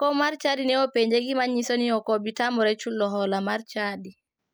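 No technical faults occur at any point in the speech, so there are none to describe in time order.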